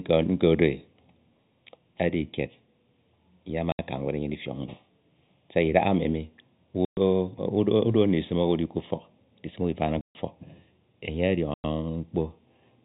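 From start to finish the speech carries channel delay (comb filtering): one channel arrives roughly a third of a millisecond late, and when the two are summed to mono, shared content cancels at evenly spaced frequencies, the first near 1.5 kHz. The voice sounds hollow and phasey. On a spectrogram this appears as fixed dark horizontal bands repeating up the spectrum, unchanged whatever is being said.

Packet loss filled with silence cuts four holes in the speech: 3.72 to 3.79 s (70 ms), 6.85 to 6.97 s (120 ms), 10.01 to 10.15 s (140 ms) and 11.54 to 11.64 s (100 ms). The receiver played nothing in place of the missing audio. Every gap is a multiple of 10 ms, which fits 10 ms packets. Each gap starts and ends with a hard edge. On the waveform these are flat silent stretches with abrupt walls, and on the spectrogram they are full-height blank vertical strips. The telephone band limit of the G.711 path stays in place throughout.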